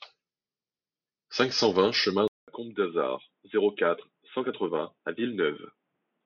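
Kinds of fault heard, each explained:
Input switched to a poorer device: right after "cinq cent vingt chemin", around 2.28 s, the speech drops out for about 0.2 s and comes back duller and a bit quieter, with nothing above 3.8 kHz and a faint new background noise well under the speech. It stays that way to the end. The likely cause is the recording jumping to a different, narrower-band mic or a headset's call mode partway through.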